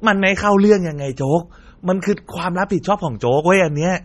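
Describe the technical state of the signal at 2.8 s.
At 2.83 s a pre-echo precedes a sharp attack. A short hiss spreads about 12 ms ahead of the onset, because the block's quantisation noise, scaled for the loud attack, also fills the quiet moment before it. On a waveform, low-level fuzz leads the transient, and the attack itself sounds softened.

This moment also carries the heavy smearing of MP3 compression, the likely cause. Weak frequency lines drop in and out between frames, giving a watery, swirly texture, and a spectrogram shows a hard ceiling with nothing above 14.4 kHz. That fits a low bitrate, around 32 kbps.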